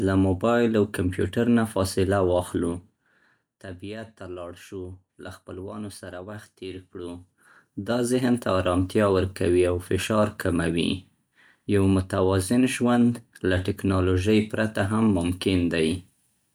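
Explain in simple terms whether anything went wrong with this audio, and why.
Yes, something went wrong: zipper noise. From 2.46 to 3.74 s the speech gets quieter in small, audible jumps, several a second, each leaving a faint tick. From 6.95 to 8.2 s it gets louder the same way. A smooth fade would glide silently, with no ticking.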